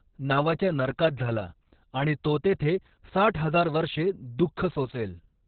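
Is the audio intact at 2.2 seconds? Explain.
No. Opus voice compression affects the whole clip, including 2.2 s. The SILK coder, running at what sounds like roughly 6 kbps, narrows the band so nothing remains above 4.5 kHz and codes the excitation coarsely. The speech sounds muffled, hoarse and faintly robotic.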